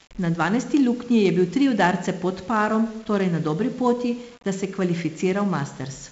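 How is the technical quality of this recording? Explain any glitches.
The technical quality is poor, with two faults present throughout the speech.

Low bit depth without dither: quiet passages and decays sound grainy, with distortion tracking the speech, likely from rounding to about 7 bits, leaving error roughly 30 dB down.

4-bit ADPCM compression: loud syllables carry a gritty hiss and heavy damage, and nothing exists above 7.7 kHz. This fits 4-bit steps at 64 kbps, pointing to a 16 kHz sample rate.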